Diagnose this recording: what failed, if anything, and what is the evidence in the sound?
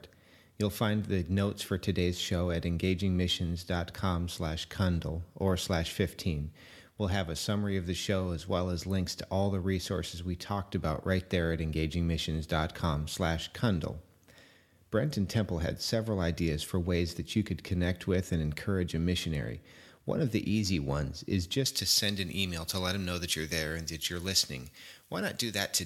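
From 21.66 s to the end, just after "the easy ones is", the speech turns thin, bright and hissy. This is pre-emphasis left on at the playback stage: treble sits about 11 dB high at 10 kHz, consistent with a J.17 curve whose matching de-emphasis was never applied.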